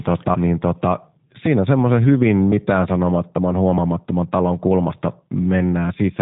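G.729 codec damage runs through the whole of this speech recording. The voice is rebuilt at 8 kbit/s from a vocal tract filter, a pitch predictor and a few pulses per frame, so it sounds plainly rough and synthetic, with nothing above 3.8 kHz. A doubled audio track is already under way at the start and ends abruptly at 2.04 s. A second full-band copy of the speech, about as loud as the first, trails it by roughly 0.7 s with no decay or room colour, likely a second capture through a slower path mixed back in.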